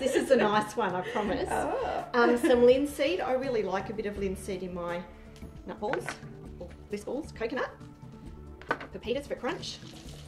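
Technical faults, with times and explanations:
5.44–10.28 s, time-stretched section: pace abruptly jumps to 1.61 times speed with pitch unchanged, so it sounds rushed, likely from software dropping short pieces to shorten it.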